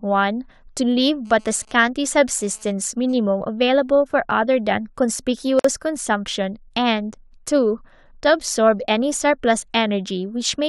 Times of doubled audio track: none

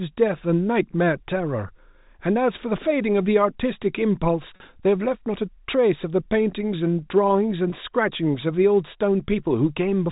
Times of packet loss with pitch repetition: 4.56-4.60, 7.70-7.72

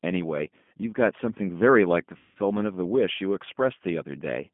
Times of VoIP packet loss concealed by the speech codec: 2.17-2.38

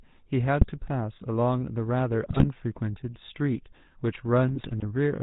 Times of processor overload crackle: none

